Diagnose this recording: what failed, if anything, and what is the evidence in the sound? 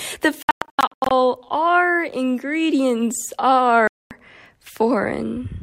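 The failure is at the playback end, on the wireless link, and the likely cause is a Bluetooth dropout. From 0.42 to 1.11 s, just before "our ingredients", the sound keeps cutting out in scattered holes that add up to about 470 ms, the longest run near 107 ms. A second hole runs from 3.87 to 4.11 s, right after "our ingredients". Packets arrived too late and were discarded, so the output went silent, then picked up as if it had played on.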